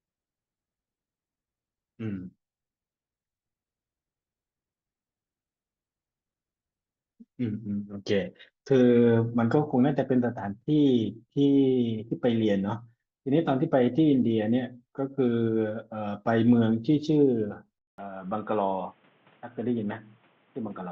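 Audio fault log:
17.78–20.92 s, input switched to a poorer device: after a 0.2 s gap, the speech returns dull, cut off above 3.8 kHz, about 5 dB quieter and over a new noise floor roughly 35 dB down, likely a microphone change. A plain filter would add neither the gap nor the new noise.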